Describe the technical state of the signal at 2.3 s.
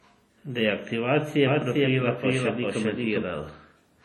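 At 2.3 s you're inside a doubled audio track running from 1.47 to 3.23 s: a second full-band copy trails about 0.4 s behind at roughly equal level, likely from a second capture path or an out-of-step edit. On top of that, there's heavy washy, ringing compression noise that breathes with the signal, with nothing above 19.7 kHz, which fits WMA at a low bitrate of around 32 kbps.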